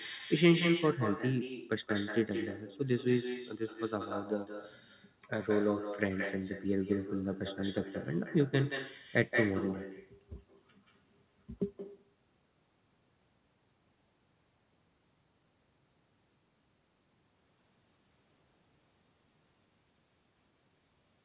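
From start to finish the speech is shadowed by echo with no canceller. The far end evidently plays the call through a loudspeaker, its microphone picks that sound back up, and nothing strips it out before it returns. Each phrase reappears roughly a fifth of a second later, about 9 dB quieter and thinner. The band-limited sound, with nothing above 4 kHz, fits a G.711 mu-law call path at 64 kbps.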